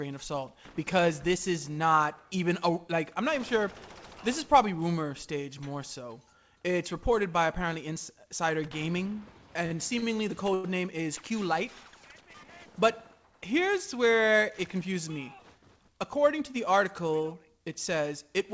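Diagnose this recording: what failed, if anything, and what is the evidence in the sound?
Network and jitter buffer: short stalls from a late packet at 9.66, 9.99 and 10.54 s, holding sound 48, 34 and 96 ms. Spectrograms show smeared flat bands, waveforms repeated cycles, below the 8 kHz ceiling.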